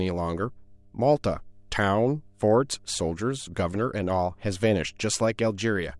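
Mains hum runs throughout the speech: a steady 50 Hz tone about 35 dB below the signal, leaked from the power line, drawing a flat line on a spectrogram.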